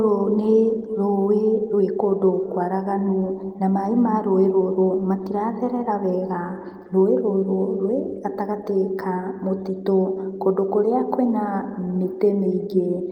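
No technical faults can be heard anywhere in this recording.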